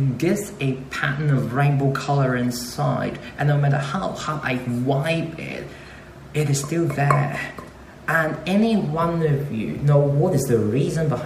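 No technical faults can be heard anywhere in the signal.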